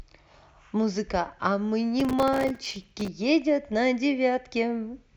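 Processor overload crackle from 2.0 to 3.08 s: dozens of few-millisecond buffers miss deadlines, each leaving a hard-edged silent gap, making the speech gritty and torn.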